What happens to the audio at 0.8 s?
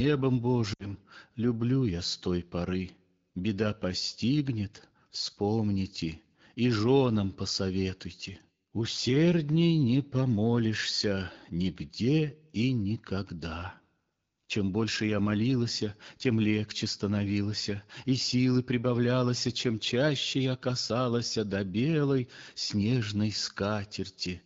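Around 0.74 to 0.91 s the speech briefly sags: the sound fades quickly toward near silence, then returns weak or rough for a moment. This is lost AMR speech frames. Radio errors corrupted the frames, so the AMR-WB decoder at 12.65 kbit/s repeated the last good pitch and vocal tract settings at falling gain. The gap of about 60 ms fits three 20 ms frames, and wideband concealment fades faster than narrowband.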